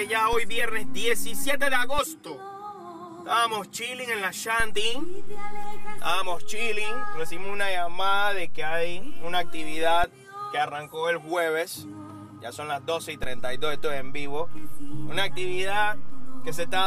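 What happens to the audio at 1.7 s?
At 1.7 s the waveform's zero line sits offset by about -20 dBFS, a DC step lasting from 0.33 to 1.99 s, heard as low thumps where it jumps.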